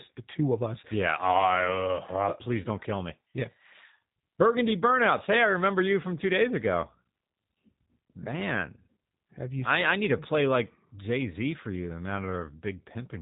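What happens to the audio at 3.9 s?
At 3.9 s the speech is still passing through a G.729 codec, as it does for the whole clip. The coder discards the waveform and rebuilds each short frame from a vocal-tract filter, a pitch predictor and a sparse set of pulses, a heavy reduction that fits a bitrate around 8 kbit/s. Nothing above 3.8 kHz survives, so the speech sounds muffled and band-limited, with a plainly audible rough, buzzy, synthetic texture.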